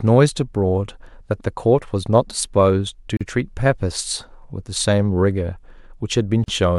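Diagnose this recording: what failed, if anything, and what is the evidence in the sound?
The speech is cut by a gap at a join of encoded pieces, a codec-stage fault: silences of 38 ms at 3.17–3.21 s and 40 ms at 6.44–6.48 s. Untrimmed encoder start delay and end-frame padding remain. Unlike a network dropout, the speech resumes exactly where it stopped, with nothing missing.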